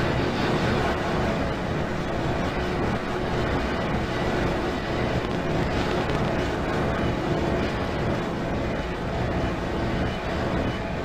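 A train of clicks runs from 5.25 to 6.29 s: about ten similar pulses at roughly 9.7 per second, unevenly spaced, poking around 15 dB above the sound. Their matching shape and short burst set them apart from random crackle, and likely come from interference or a faulty connection or power supply.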